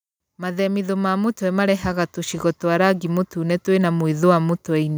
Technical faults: automatic gain rising

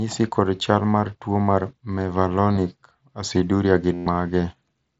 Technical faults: concealed Bluetooth headset packet loss

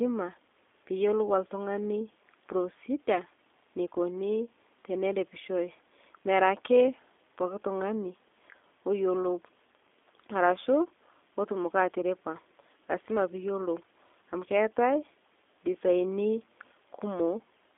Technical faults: G.729 codec

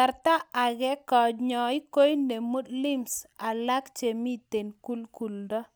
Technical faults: none

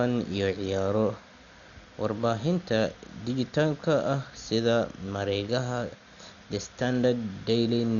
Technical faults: Dolby Digital compression

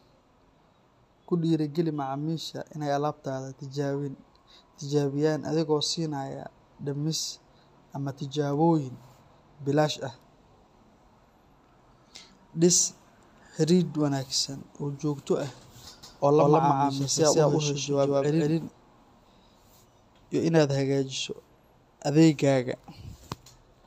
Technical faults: doubled audio track

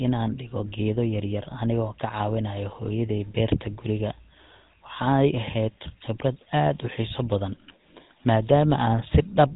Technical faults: GSM full-rate codec

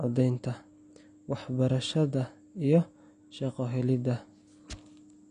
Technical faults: AAC compression

